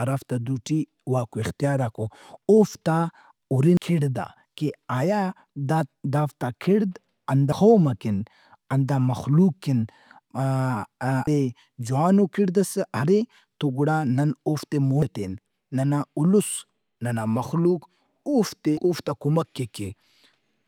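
At 3.77, 7.52, 11.27 (before "جوانو کِڑدئس ارے تو"), 15.02 (after "تو گڑا نن اوفتے") and 18.77 s, speech jumps ahead by roughly a third of a second with no gap. This is audio missing between chunks, likely lost at each handover between 4 s chunks.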